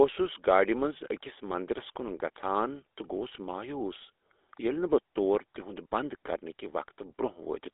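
From start to finish the speech carries the damage of the GSM full-rate codec. The codec rebuilds the voice from a vocal-tract model fed by sparse regular pulses, which gives a plainly audible buzzy, gravelly roughness. That rate fits a 13 kbps stream. The sound sits in a narrow line band of roughly 300 Hz to 3.6 kHz. On a spectrogram, energy stops sharply near 3.8 kHz, with empty space above and a thin floor below 300 Hz.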